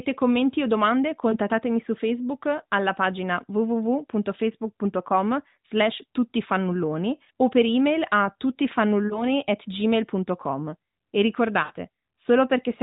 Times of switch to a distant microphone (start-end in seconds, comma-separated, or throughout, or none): none